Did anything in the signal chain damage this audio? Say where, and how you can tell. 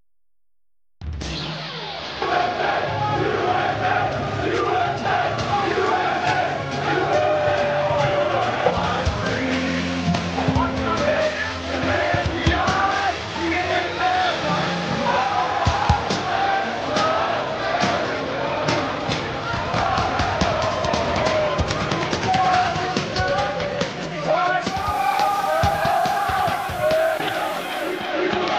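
Yes, at the reception stage. Around 24.64 s a hybrid radio loses its digital stream and does a digital radio blending to analogue, cross-fading over about 0.36 s onto the station's FM signal, then back at about 28.15 s. You can hear a hiss floor come up, roughly 20 dB under the programme, and the level drops by about 1 dB. The receiver swaps to the noisier analogue copy of the same broadcast while the digital signal is gone.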